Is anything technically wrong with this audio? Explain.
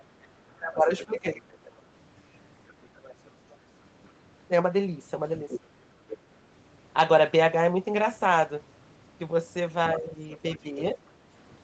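Yes, the speech carries two related call faults.

Other side's voice leaking through appears at 0.57 to 1.19 s, 2.68 to 4.11 s, 5.49 to 6.17 s and 10.32 to 10.59 s, about 10 to 30 dB below the talker and loudest around 5.5 s. The likely cause is an echo canceller leaving loudspeaker playback in the microphone signal. On a spectrogram it shows as faint, separate harmonic traces, all under the 8 kHz ceiling of the Opus call path.

Speech suppressed in double talk occurs from 0.59 to 1.7 s, dipping by about 20 dB for roughly 0.7 s in total, and again from 9.98 to 10.97 s, where the dip is milder, about 5 dB over roughly 0.4 s. Both overlap the leaked voice, likely because the canceller turned everything down while both sides talked. The waveform envelope sags or breaks into pieces there.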